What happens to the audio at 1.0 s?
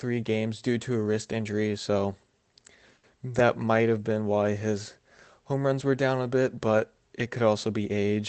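Nothing goes wrong at 1.0 s; the speech is intact at that moment, carried through the call path with its ordinary coding and limited top end.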